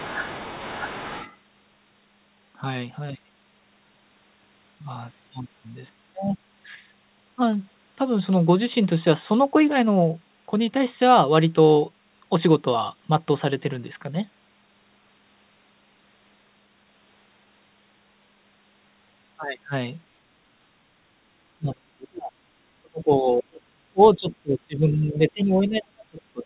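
From 0.00 to 1.37 s the other side's voice leaks through: a second voice sits roughly 15 dB under the speech. The likely cause is a loudspeaker echo that the echo canceller did not fully remove from the microphone. It is heard within the same narrow band as everything else, with nothing above 4 kHz, which fits a 64 kbps G.711 A-law call path.

Speech is suppressed in double talk from 21.58 to 22.34 s and again from 22.77 to 23.54 s. In each stretch the talker's level falls by as much as roughly 30 dB for most of its length, so the voice sinks. This likely happens because the canceller could not separate the talker from the incoming echo and turned both down.

At 23.55 to 23.61 s a brief scrap of the other side's voice leaks through, very faint at roughly 30 dB below the speech, again likely residual echo.

From 23.89 s to the end, speech is suppressed in double talk once more, dropping by as much as roughly 35 dB. 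The talker's voice is turned down in this final stretch, likely because the canceller is again attenuating both voices during overlap.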